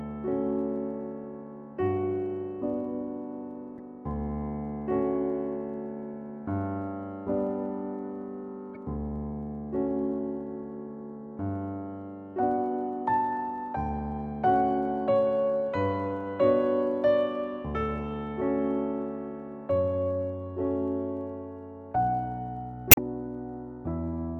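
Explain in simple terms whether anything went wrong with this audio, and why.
Two devices most likely ran on unmatched clocks, roughly a thousandth apart, causing clock slip clicks: a faint, steady rattle of ticks about fifty times a second from 0.11 to 24.39 s.

Damaged data in a compressed stream made the decoder lose its place, giving brief chirps or blips at 3.76–3.81 s, 8.74–8.77 s and 22.89–22.98 s.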